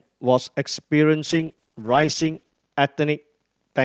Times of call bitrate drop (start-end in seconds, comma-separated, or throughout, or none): 1.31-3.84